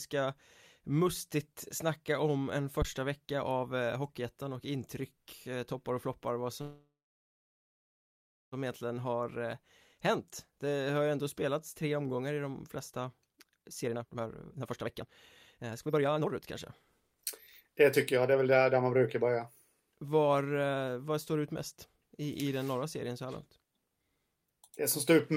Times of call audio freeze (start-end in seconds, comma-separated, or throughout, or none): 6.61-8.54